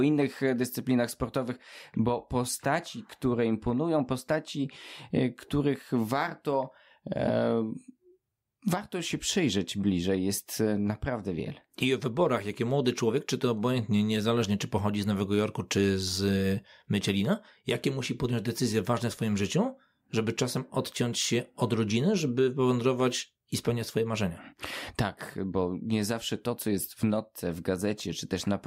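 No technical fault can be heard anywhere in the recording; the signal stays intact and continuous throughout.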